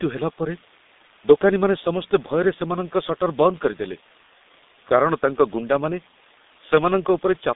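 G.723.1 codec damage runs throughout the speech: nothing above 3.8 kHz survives, and the coarse 30 ms frame coding, consistent with roughly 6.3 kbit/s, leaves voices muffled, hoarse and consonant-smeared.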